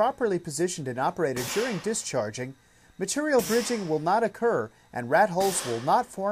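No technical faults are audible.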